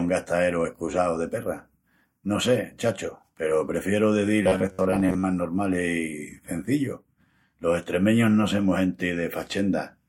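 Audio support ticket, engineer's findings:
Robotic sound from repeated short buffers, 4.42–5.25 s, after "peru prefieru de". Rigid 93.8 Hz buzz. Likely audio starvation repeating about 10.7 ms chunks, roughly half.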